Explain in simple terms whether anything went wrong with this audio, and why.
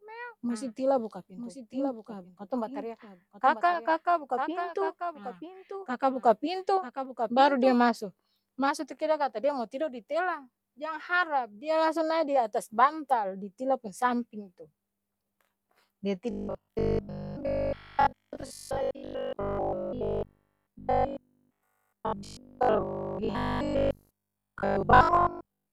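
Doubled audio track, from the very start until 7.78 s: the speech is heard twice, with a fainter copy trailing about a second behind the original. The copy is just as clear as the main sound, with no echo or room tail, and it cuts off abruptly at 7.78 s. This likely happened because the same speech was picked up a second time through a slower route, or because an edit left two copies out of step and mixed them together.

Robotic sound from repeated short buffers, from 16.31 s to the end: the speech turns into a stiff, metallic buzz that still roughly follows the talking. New audio was arriving too rarely, so the playback kept repeating the last tiny slice to fill the gaps, and most of the real speech was skipped. The steady 50 Hz buzz fits slices about 20 ms long being looped over and over. The likely cause is audio data arriving late or irregularly.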